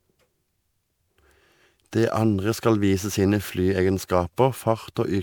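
Generation loss runs throughout: the speech sounds swirly, hollow and smeared with blurred attacks, likely from about seven MP3 re-encodes, each fitting 128 kbit/s.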